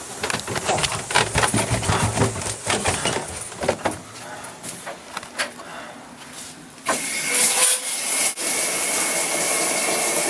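No technical faults can be heard anywhere in the audio. Nothing in the sound points to a problem that needs describing.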